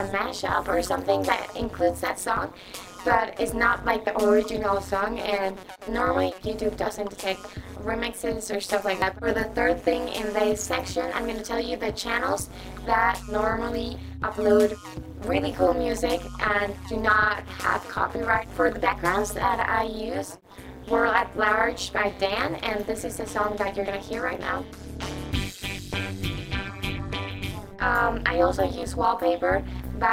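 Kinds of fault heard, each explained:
Overlap-add ripple: throughout, frames rejoined with overlaps that don't sum evenly make the level pulse by about 60 dB around 200 times a second, a metallic buzz with extra tones around each note.
Audio missing between chunks: at 4.07 and 9.02 s, about 50 ms of sound vanishes and the edges butt together, likely lost while switching between 5-second chunks.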